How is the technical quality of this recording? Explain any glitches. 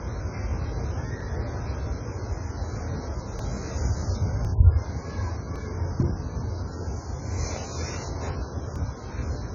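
Technical quality is poor: the whole recording carries heavy lossy-codec damage, and five brief skips interrupt it.

Throughout, the sound is dull and smeared, and the high end is cut off. This is likely AAC compression, which fits AAC-LC at a very low bitrate, around 12 kbps. With so few bits, the encoder lowers its cut-off and quantises each frame's frequency lines coarsely, so sustained sounds take on a warbling, fizzy texture. On a spectrogram, energy stops at a hard ceiling, with patchy holes and blotches below it.

At 1.21, 3.39, 4.45, 5.56 and 8.76 s, the audio jumps ahead. These are likely dropped buffers from an overrun: the hardware overwrote samples before they were collected, and the surrounding audio was spliced together with no gap. The other skips each remove about 10 ms, and the one at 5.56 s removes about twice that. A waveform shows a sudden discontinuity at each point, and a spectrogram shows a thin vertical broadband line there.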